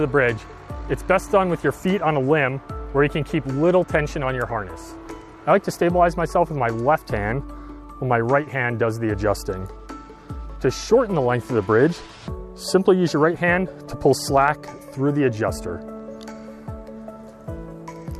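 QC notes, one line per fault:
Nothing to flag here; I listened the whole way and didn't hear a single problem worth noting.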